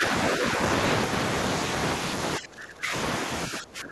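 Speech suppressed in double talk at 0 to 0.11 s, 0.36 to 0.59 s, 2.38 to 2.93 s and 3.48 s to the end. An echo canceller likely mistook the talker for echo and ducked the voice, mildly at first, then by roughly 20 dB.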